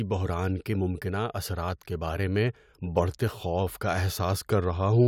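Nothing stood out on listening to this speech recording.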